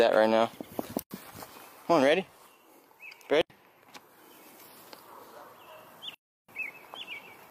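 Three blocks of digital silence cut the audio at 1.02 s and 3.41 s (85 ms each) and at 6.14 s (341 ms), pointing to unfilled output buffers or invalid computed values.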